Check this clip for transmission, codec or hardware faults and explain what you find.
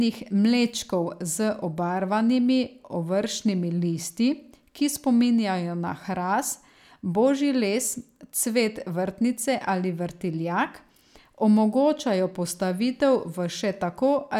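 Nothing stood out on listening to the speech here; I heard no problems to report.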